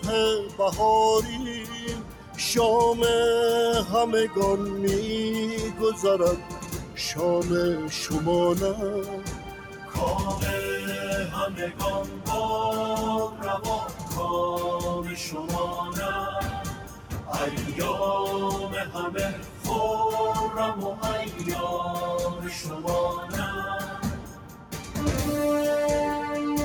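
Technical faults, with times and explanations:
Throughout: noise suppressor applied to music or sounds. A speech-tuned suppressor stayed active and kept mistaking sustained material and ambience for noise, pulling gain in and out by roughly 10 dB, so the sound pumps and thins as held parts and tails are repeatedly turned down.
0.00–2.38 s, 5.73–6.98 s, 9.19–9.95 s, 11.52–17.29 s, 18.86–24.96 s: sound cut by the noise suppressor. In these spans the suppressor classed parts of the sound as noise and attenuated them by up to about 7 to 8 dB, for roughly 0.7 to 2 s in total per span. Sustained and decaying portions sink or end early, while sharp onsets still come through.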